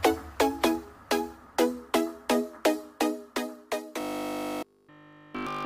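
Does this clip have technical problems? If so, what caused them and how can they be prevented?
Yes. From 4.01 s to 5.65 s the sound collapses into a rigid, metallic buzz pitched at 50 Hz, with essentially the whole stretch replaced by repetition. This is robotic sound from repeated short buffers. The likely cause is new audio arriving too seldom, so the software keeps replaying the last chunk while the real audio is skipped. A 50 Hz pitch means each repeated chunk lasts 20 ms. Steady audio delivery, with enough buffering to absorb network or processing stalls, would prevent it.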